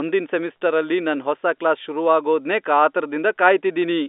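No technical faults can be heard in the speech. It comes through a G.711 telephone path, with the sound held to a line band of roughly 250 Hz to 3.6 kHz and nothing above 3.8 kHz.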